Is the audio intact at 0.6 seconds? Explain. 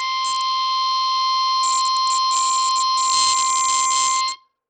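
No. Throughout the music, 0.6 s included, nothing sounds above about 9.3 kHz, the treble flickers, and gritty noise rides on the mix. This is likely Bluetooth SBC compression at a starved bit pool, fitting roughly 64 kbps, where top sub-bands lose their bits and the rest is coarsely quantised.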